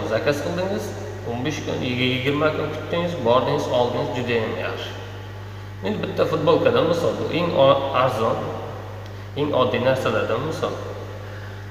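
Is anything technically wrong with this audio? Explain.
Yes. Mains hum runs throughout. A steady 50 Hz tone, roughly 15 dB below the sound, comes from power-line coupling through a ground loop or nearby transformer.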